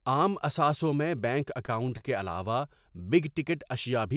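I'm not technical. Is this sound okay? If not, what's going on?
No. There are two short stalls from a late packet, at 1.66 to 1.70 seconds, just after "عام اثاثوں میں بینک", and again at 1.98 to 2.03 seconds. In each case a piece of the call audio arrived late, so the receiving end held the last bit of sound for about 20 and 27 milliseconds while it waited, then carried on from the same spot. No speech is lost, but the sound drags briefly, with a faint buzz or dip. The telephone-style narrow sound, with nothing above 4 kHz, comes from the call path itself.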